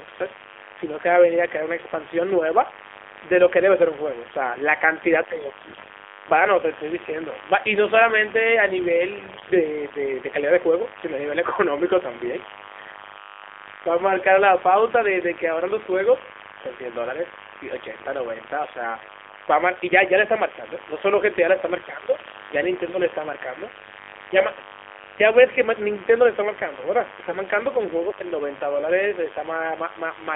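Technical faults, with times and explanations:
Throughout: mains buzz. A steady, raspy buzz sits roughly 15 dB below the speech, built on 50 Hz with harmonics climbing well up the band. Sharp switching spikes from a dimmer, rectifier or poorly shielded lead, twice per mains cycle, create that dense harmonic comb.
Throughout: AMR narrowband mobile codec. The speech is confined to a 300 Hz to 3.5 kHz telephone band and sounds plainly buzzy and synthetic, consistent with a low AMR-NB mode around 7.4 kbps, where a sparse set of pulses drives a vocal-tract model.
5.60–5.91 s, 9.18–9.60 s, 22.18–22.35 s and 27.22–27.37 s: AMR bit errors. The speech briefly turns hoarse, scratchy and gargly while roughly keeping its pitch and loudness. Corrupted low-priority bits misplace the excitation pulses and skew the fine spectral and gain values.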